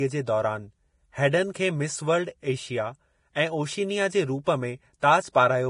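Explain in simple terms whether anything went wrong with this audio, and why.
Throughout the speech there is heavy damage of the kind Vorbis compression produces. Nothing comes through above about 10.5 kHz, so the top end sounds dull, and the remaining treble is rough and hissy, with a grainy texture on sibilants and softened consonant onsets. The likely cause is encoding at a low quality setting, where the codec keeps only a coarse outline of the high frequencies and replaces the fine detail with noise of similar loudness.

There are three places with pre-echo: at 1.54 s, from 4.44 to 4.46 s, and from 5.00 to 5.03 s. Each time, a short smear of hiss lasting roughly 16 to 26 milliseconds comes just before a sharp attack, so the attack sounds blurred. The codec processes sound in small blocks and spreads its errors evenly across each one. When a sudden loud onset lands late in a block, the noise meant for that loud part leaks into the quiet moment before it.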